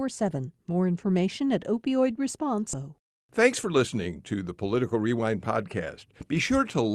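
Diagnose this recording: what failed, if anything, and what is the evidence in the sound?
A skip ahead in the network and jitter-buffer stage occurs at about 2.73 to 2.84 s. Roughly seven tenths of a second of speech is missing, and the two sides are spliced almost directly with no gap. This fits late audio being discarded while newer packets waited.

Jitter buffer speed-up occurs from 3.30 to 3.88 s, just before "to the", at 108% speed, and again from 4.74 to 5.27 s, just after "to the", at 111%. Pitch holds steady while pitch-period slices are cut, removing a few tens of milliseconds each time.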